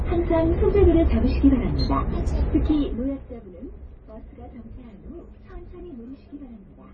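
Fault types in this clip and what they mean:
MP3 compression: everything above 9 kHz is simply gone, and what's left sounds watery and swirling with smeared attacks. That's heavy damage throughout, likely from an MP3 encoder starved of bits, which fits a very low bitrate somewhere around 23 kbps.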